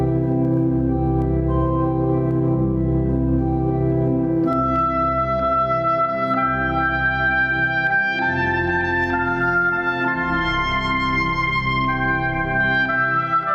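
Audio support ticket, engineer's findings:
Gain pumping throughout: around 10 dB swing, squashed feel. Likely input gain set way too hot, fast limiter clamping down.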